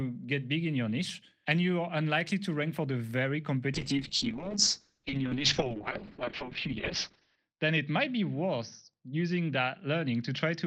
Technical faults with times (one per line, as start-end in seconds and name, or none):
3.74-10.67 call bitrate drop